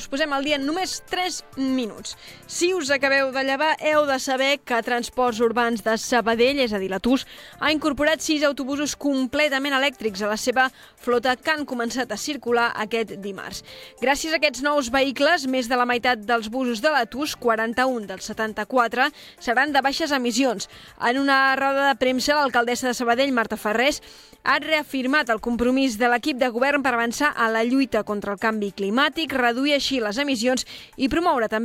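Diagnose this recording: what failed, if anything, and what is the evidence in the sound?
Nothing failed; the recording shows no faults.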